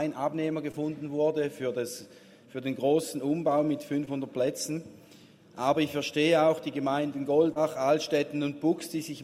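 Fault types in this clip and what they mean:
Short concealed packet loss: three brief dropouts, two of about 20 ms and one of about 40 ms near 7.5 s, each patched by extrapolation and heard as a quick smear.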